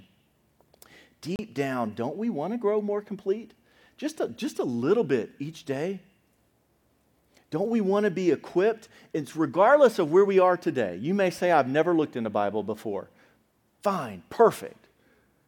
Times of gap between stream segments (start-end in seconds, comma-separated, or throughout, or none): 1.36-1.39